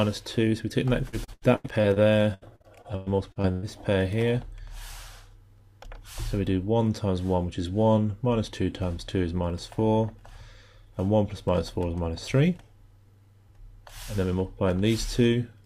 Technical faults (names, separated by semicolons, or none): repeated packet loss (robotic sound)